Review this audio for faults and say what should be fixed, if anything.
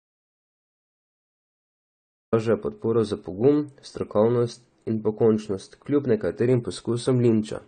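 The clip opens in an audio dropout to silence that is already under way and lasts until 2.33 s. The gap holds no room tone at all, and the speech then comes in mid-flow. The likely cause is input lost to a disconnected device, a failed link or a mute while recording continued. On the waveform the first 2.33 s are a flat line, and the spectrogram shows a blank band before energy appears abruptly. Confirm the input path is connected and unmuted before recording starts.

Throughout the clip there is AAC compression damage that is plainly audible. The speech sounds dull, with smearing and a warbling or fizzy texture. This is likely AAC-LC at a low rate, and the sound fits about 32 kbps, where the encoder lowers its cut-off and quantises coarsely. On a spectrogram nothing appears above 9 kHz, giving a hard ceiling. Export at a higher bitrate or keep a lossless master.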